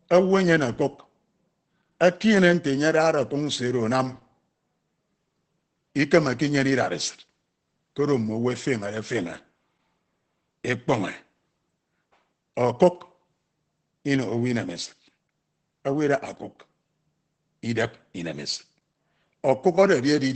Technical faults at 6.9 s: Opus voice compression

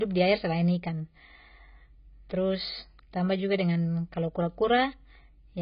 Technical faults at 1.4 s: AAC compression

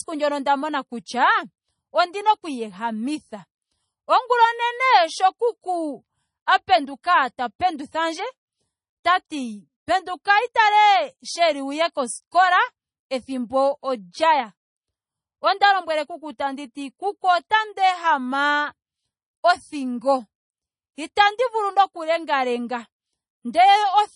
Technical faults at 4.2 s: low-bitrate audio saved at a high bitrate

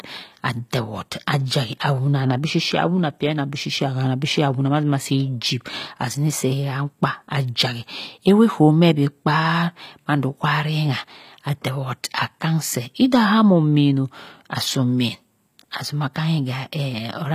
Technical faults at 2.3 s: HE-AAC compression

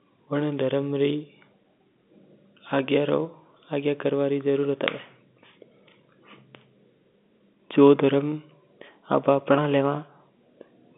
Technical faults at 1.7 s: none

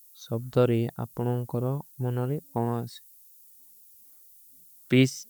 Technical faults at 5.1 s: low bit depth with noise shaping

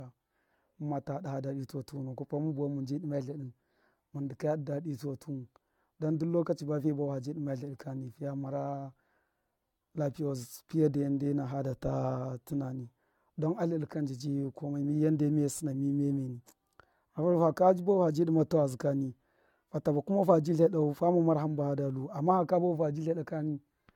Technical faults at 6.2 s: generation loss

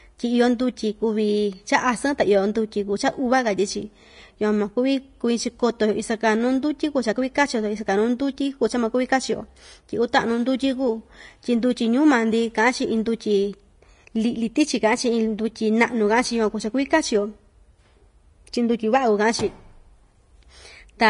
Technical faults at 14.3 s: Vorbis compression

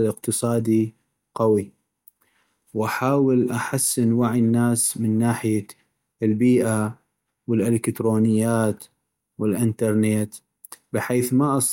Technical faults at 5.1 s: none

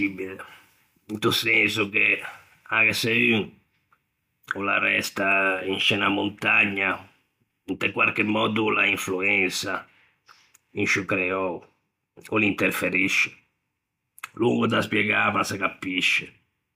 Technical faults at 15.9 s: none

